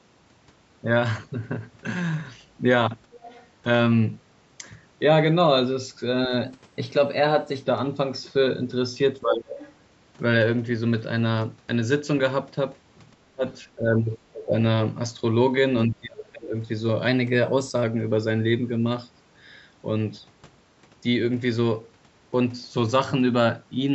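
From 3.15 to 3.47 s a faint second voice sits about 25 dB under the talker, likely the other side's voice leaking through because the echo canceller left some loudspeaker pickup in the microphone. On a spectrogram it shows as weak, smeared harmonics layered under the main ones. It returns from 9.53 to 9.73 s at about 20 dB down.

At 6.27 to 6.32 s the level dips slightly, by about 5 dB. This is likely speech suppressed in double talk, where the canceller turned down both sides at once. Deeper cuts follow at 9.22 to 9.58 s (about 30 dB), 13.23 to 13.43 s, 14.28 to 14.54 s and 15.87 to 16.56 s (each about 25 dB), with a milder dip of about 10 dB at 13.76 to 14.03 s. The waveform pinches sharply there, and the spectrogram thins to faint, gappy bands.

From 6.45 to 7.64 s the audio runs 6.37% fast and rises 107 cents, about a semitone, then snaps back. This is likely a drift correction step: clock-matching software jumped the playback rate to rebalance its buffer. 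The same shift recurs from 17.08 to 17.84 s. On a spectrogram the harmonics step upward as a block and drop back at the end. The clip's top edge stops at 8 kHz throughout.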